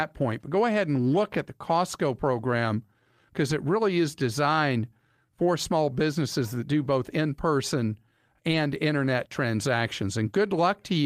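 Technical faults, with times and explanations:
3.49–3.51 s and 8.51–8.53 s: lost packet rebuilt from error correction. Each dropout fits a single 20 ms packet replaced by the low-bitrate copy carried in the next packet. There is no gap, but the speech turns briefly rougher and noisier. On a spectrogram each shows as a short smeared, grainier slice, and the waveform stays continuous.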